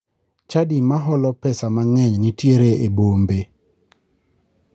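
From 0.33 s to 3.48 s the speech and the room noise behind it swell together, climbing steadily by about 10 dB over roughly three seconds rather than jumping. This is automatic gain rising: the call's gain control judged the incoming level too quiet and kept turning its gain up gradually, lifting everything in the signal at once. Throughout, the sound tops out near 8 kHz, as the call path passes nothing higher.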